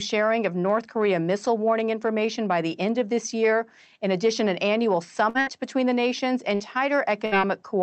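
Bursts of packet loss left the receiver extending the previous sound to cover gaps of about 50 to 60 ms each. After "in addition an annual" there are two, at 5.29 to 5.38 s and 5.41 to 5.50 s, before "between the nations". After "between the nations" come two more, at 6.55 to 6.63 s and 7.26 to 7.35 s. Each sounds like a brief fading buzz or hiss, and the sound then resumes with a short stretch missing.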